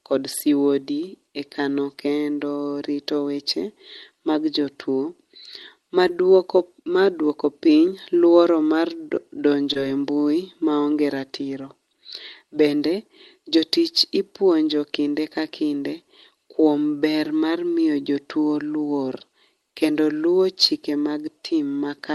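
Short concealed packet loss occurs at 6.07 to 6.11 s and again at 9.73 to 9.77 s. Each time about 20 ms of the call failed to reach the decoder in time, and the receiver bridged the gap by extending the preceding speech, carrying its pitch forward where it was voiced or substituting shaped noise where it was not, then blending back into the real signal. Each gap is heard as a brief smear or wobble within the call's 12 kHz band.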